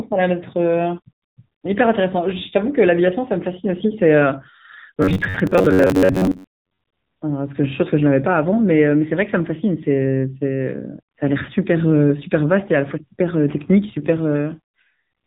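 Throughout, the speech carries the AMR narrowband mobile codec's signature: a hard ceiling at 4 kHz, visible as an empty spectrogram above that line, and a buzzy, synthetic edge that fits a low bitrate of about 8 kbps, where the vocal-tract model runs short of pulses.

From 5.02 to 6.81 s, the speech turns into a rigid metallic drone with robotic sound from repeated short buffers, likely caused by audio arriving late while roughly half of it is replaced by loops of the last buffer. The fixed 93.8 Hz buzz suggests repeats of about 10.7 ms, appearing as evenly spaced vertical striations and identical waveform cycles.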